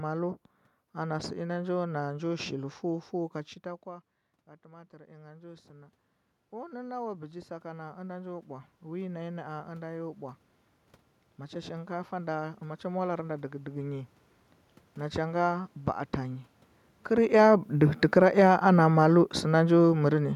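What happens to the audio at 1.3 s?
Nothing goes wrong at 1.3 s; the speech is intact there, with only the room's own background noise underneath it.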